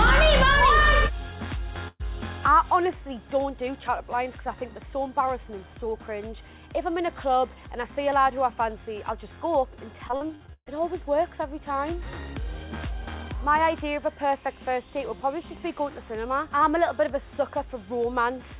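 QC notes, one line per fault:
1.88–2.02 s, burst of packet loss: the sound smears into a fading continuation of the last sound with a brief silence, then jumps ahead; roughly 120 ms went missing and was patched by extending the last sound.
10.08–10.68 s, repeated packet loss (robotic sound): choppy stuttering across seven gaps, the longest 130 ms; nearly half this stretch is concealed guesswork with real audio missing.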